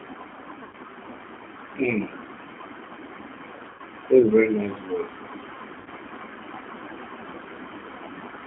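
From the first moment, the speech has that G.729 codec character: an 8 kbit/s low-rate coder rebuilding the voice from a vocal tract filter, a pitch predictor and a handful of pulses per frame. The damage is plainly audible, with a slightly rough, synthetic edge. The band sits at roughly 200 Hz to 3.6 kHz, so everything above is simply gone and the sound is thin, telephone-like.

At 0.63 s you get VoIP packet loss concealed by the speech codec. About 100 ms of audio went missing, which fits roughly ten 10 ms frames, and the decoder papered over it by repeating its last pitch and filter with the gain sinking frame by frame. It smears into a buzzy tone or coloured noise that fades until about 0.76 s. The same happens at 3.70 s (90 ms lost, through 3.82 s) and at 5.80 s (60 ms lost, through 5.89 s). Each time the voice stays a bit weak or off just after, since each new frame builds on the patched-over one.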